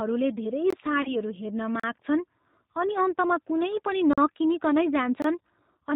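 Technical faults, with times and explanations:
Throughout: G.729 codec. The speech sounds rough, slightly synthetic and dull, with nothing above 4 kHz. The 8 kbit/s codec rebuilds each 10 ms frame from a vocal tract filter, a pitch predictor and a few pulses, discarding the fine detail.
0.70–0.73 s, 1.80–1.84 s, 4.13–4.18 s, 5.22–5.24 s: block of digital silence. Each is a hole of about 21 ms, 38 ms, 43 ms and 21 ms, where the sound cuts out with no fade. The output buffer was likely not filled in time; the 21 ms and 43 ms gaps fit 1024- and 2048-sample buffers.
1.02–1.16 s: VoIP packet loss concealed by the speech codec. The speech smears into a buzzy tone or coloured noise that fades, and stays weak for a while afterwards. About 30 ms of audio was missing, so the decoder extended its last pitch and filter with falling gain and needed several frames to recover.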